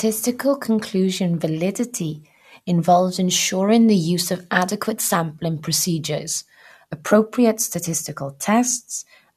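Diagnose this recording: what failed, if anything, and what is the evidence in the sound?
Nothing in the chain shows a fault: no dropouts, clicks, clipping, pitch or timing anomalies are audible anywhere in the speech.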